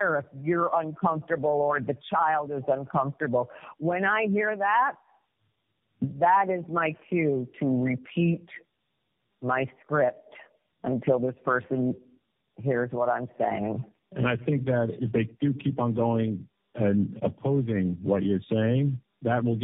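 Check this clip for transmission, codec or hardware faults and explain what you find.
One fault is present: tandem speech coding, running through the entire clip. The speech was decoded and re-encoded across three low-rate codecs in a row, consistent with a chain like G.729A into AMR-NB twice. Each pass compounds the last, leaving rough, muffled, warbly speech. A spectrogram shows nothing above 3.7 kHz and smeared, blotchy formants.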